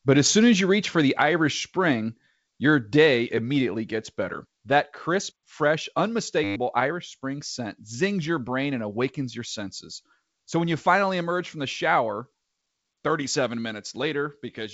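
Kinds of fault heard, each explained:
System hang loop: at 6.44 to 6.56 s, just after "crisp fresh", the playback freezes and one 10 ms slice of speech repeats about a dozen times, giving a brief buzz at 100 Hz as the hardware cycles its ring buffer while roughly a tenth of a second of audio is lost.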